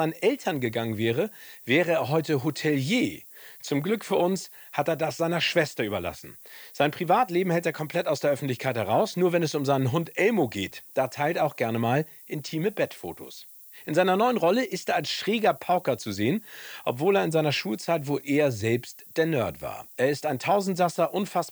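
From start to finish the speech carries a steady, thin hiss that climbs sharply toward the top of the band, the mark of low bit depth with noise shaping. The coarse quantisation, consistent with about 8 bits, leaves rounding error that has been pushed upward in frequency, sitting roughly 25 dB below the speech. A spectrogram shows a constant noise floor brightening into the highest frequencies, even in pauses; the waveform never settles to true silence.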